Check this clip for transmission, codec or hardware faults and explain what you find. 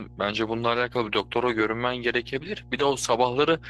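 Two faults stand out here: a mains hum under the whole thing, and a couple of brief rough patches where lost audio was patched in.

Mains hum runs throughout: a steady 60 Hz tone, roughly 20 dB below the speech, from a ground loop or transformer leaking power-line frequency into the signal.

Lost packets rebuilt from error correction show up at 1.65–1.71 s and 2.79–2.81 s. The first fits two lost packets, about 40 ms; the second is around 20 ms. Opus played the low-bitrate backup copies, so the sound stays continuous but turns briefly rougher and noisier.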